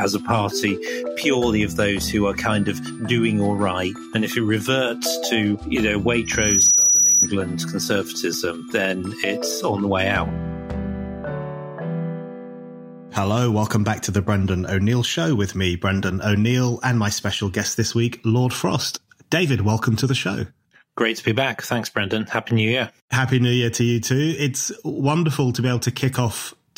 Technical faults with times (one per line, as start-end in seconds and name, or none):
6.25-7.30 loudspeaker feedback squeal